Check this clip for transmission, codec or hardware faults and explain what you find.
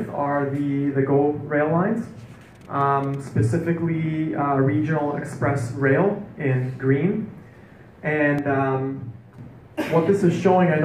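One transmission fault is present. From 8.39 to 9.39 s there is channel delay (comb filtering): one channel arrives around 10 ms late, and summing to mono cancels shared content at evenly spaced frequencies, first near 50 Hz, giving a hollow, phasey tone. Unlike a flanger, these notches stay fixed rather than sweeping.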